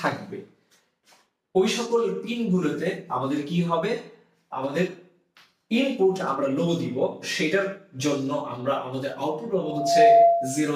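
A microphone-to-loudspeaker loop tipped into gain above one at 681 Hz, so from 9.61 to 10.73 s a loudspeaker feedback squeal swells in about 0.4 s, ending roughly 10 dB above the programme.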